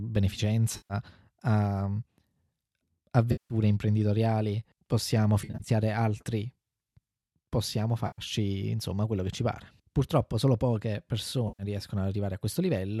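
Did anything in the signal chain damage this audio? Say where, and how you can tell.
Yes. AAC frame loss with concealment, a network fault. Smeared, noisy patches at 0.77, 3.32 (before "imprenditoriali possiamo"), 5.42 (scattered), 8.07 and 11.48 s (after "solo poche"). Each lasts 110 to 180 ms. The decoder rebuilt the missing frames from the last good spectrum.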